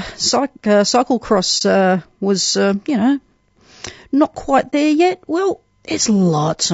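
A low-bitrate, short-frame codec is the likely cause of the damage heard across the whole clip, most likely low-delay AAC compression of the AAC-ELD kind used for calls. Its short frames resolve the voice's harmonics poorly, and the coarse quantisation fits a rate around 32 kbps. The speech comes out rough and grainy, with noise filling the gaps between harmonics and a top band that sounds thin and synthetic. The damage is plainly audible throughout.

Twice the decoder lost a block of coded data and zeroed its spectrum, which is AAC frame loss with muting. The first is at 1.58–1.62 s, just before "uh was uh you". The second is at 4.70–4.74 s, between "not quite" and "yet well". Each gap fits one frame of about 30 ms. Because the overlapping windows fade the sound out and back in, each one is heard as a brief, soft-edged dropout.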